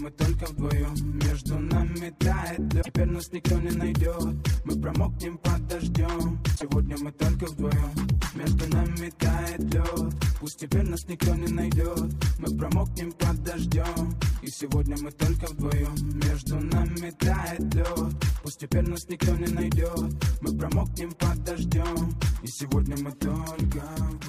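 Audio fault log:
2.78–2.89 s and 6.52–6.63 s, damaged data in a compressed stream: two brief glitches, about 0.11 s each, where the decoder hit corrupted frames, lost sync and hunted for the next header.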